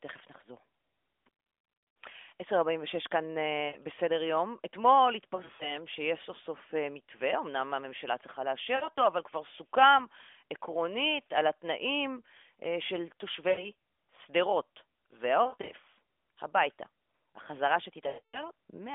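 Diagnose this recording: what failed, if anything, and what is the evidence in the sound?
Lost AMR speech frames on the radio link, at 3.68–3.78, 5.36–5.78, 8.76–8.99, 13.50–13.70, 15.44–15.72 and 18.08–18.44 s. The decoder repeats the last pitch with falling gain, giving a drawn-out, fading warble rather than the abrupt silence or click of a plain dropout.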